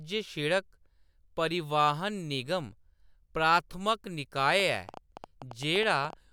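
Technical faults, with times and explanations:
4.60 to 6.14 s: train of clicks, likely from nearby equipment interference or a faulty connection injecting pulses about 9.1 per second, irregularly spaced, heard as uneven ticking above the speech.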